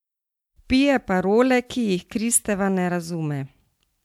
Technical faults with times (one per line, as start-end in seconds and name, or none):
none